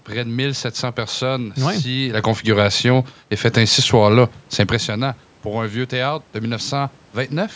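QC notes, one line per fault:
No faults found in the speech. The call microphone processing leaves nothing above 8 kHz, room noise sits in the background, and the level changes around 2 s and 4.5 s come from the talker moving relative to the microphone.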